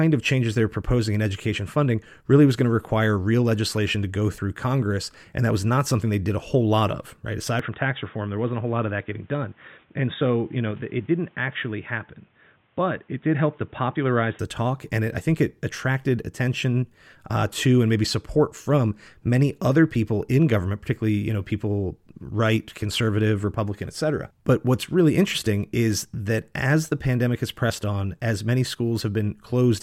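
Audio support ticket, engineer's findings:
Speech turns dull and boxy at 7.59 s, just before "the talk and it", no gap at the switch. Nothing above 3.8 kHz until 14.39 s. Level drops a few dB. A faint new noise floor appears. Full band returns at 14.39 s. Likely cause: input switched to a poorer device, a narrower-band mic or headset call profile. That device brings its own tone, gain and noise.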